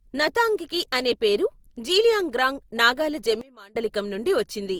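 Throughout the speech there is generation loss: a swirly, hollow smearing with blurred consonant attacks, heavier than a single Opus pass at 48 kbit/s would leave. The likely cause is roughly three rounds of encoding, each requantising on a shifted frame grid so the damage piles up, unlike one low-bitrate pass.

Right after "అనే పేరు జీలియాంగ్రాంగ్ నాగాల", from 3.41 to 3.76 s, a sudden gain jump drops the level by about 24 dB, likely from a gain setting applied without a ramp. Speech and background noise fall and return together, abruptly rather than fading as a natural dip would.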